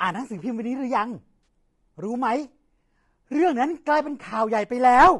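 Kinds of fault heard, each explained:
Low-delay AAC compression, throughout: the voice has a rough, grainy texture with noise filling the gaps between harmonics, and the top band sounds thinned and synthetic. This is likely the low-delay AAC used in video calls, AAC-ELD, whose short frames resolve pitch harmonics poorly. The damage is plainly audible here and points to a low bitrate of around 32 kbps.
AAC frame loss with concealment, at 1.43 to 1.47 s and at 4.29 to 4.32 s: each spot is a brief smeared, noisy or phasey patch where the decoder rebuilt missing audio from the last good spectrum instead of decoding the real signal. The first gap lasts 40 ms, which fits two lost frames, and the second about 20 ms, fitting one. Both are short enough that the sound never fades toward silence.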